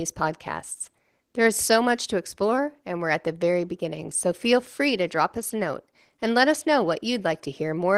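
Opus voice compression throughout, at a rate that points to about 16 kbps, hybrid mode: SILK codes the speech band and a thin CELT layer covers the top. Its coarse excitation coding leaves the speech plainly hoarse and slightly robotic, with a muffled edge.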